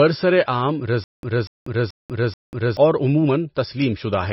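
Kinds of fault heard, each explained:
MP3 compression: The speech sounds dull and watery throughout, with nothing above 5.6 kHz and a swirling, metallic edge on sibilants. The likely cause is heavy MP3 encoding at a low bitrate around 24 kbps, which cuts the treble and drops weak frequency lines frame by frame.
Stutter with silent gaps: From 1.04 to 2.77 s, a 0.24 s burst of sound repeats four times at a steady 0.43 s interval, each followed by about 0.19 s of digital silence. The likely cause is a stalled player replaying its last fragment on each retry, so the audio belonging to that stretch is lost.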